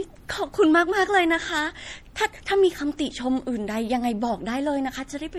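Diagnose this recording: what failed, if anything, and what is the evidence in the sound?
MP3 compression, likely, throughout the speech: a watery, swirly treble and smeared attacks suggest a starved codec stage, consistent with about 48 kbps, dropping weak frequency lines frame by frame.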